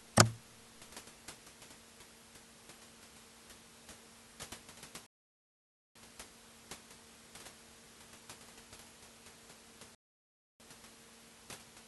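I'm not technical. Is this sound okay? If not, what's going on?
No. Twice the player ran out of downloaded audio and had to wait for more, a rebuffering stall: the speech halts in silence from 5.06 to 5.95 s and from 9.95 to 10.60 s, then picks up exactly where it stopped.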